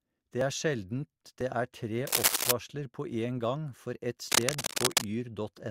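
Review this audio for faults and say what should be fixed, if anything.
Overlap between stream segments appears at 0.41 s and again at 2.41 s, heard as a tiny skip where the speech jumps forward. The timestamps of neighbouring segments claim the same stretch of time, so the player trims the apparent duplicate. That audio was never actually doubled, so a few milliseconds of real speech are lost and the waveform steps abruptly. The second instance falls inside a scratch burst. Prevention: make the packager write contiguous, non-overlapping segment timestamps so the player has nothing to trim.

Cable scratch noise runs from 2.07 to 2.51 s and from 4.28 to 5.05 s. Both are dense, uneven bursts of rustling laid over the speech, about 5 dB louder than the speech itself. The likely cause is a worn cable, connector or control being moved, which makes the contact resistance fluctuate rapidly and inject this crackle into the signal. 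The two bursts last roughly half a second and three quarters of a second. Prevention: replace or reseat the suspect cable and connectors, and keep the line still while recording.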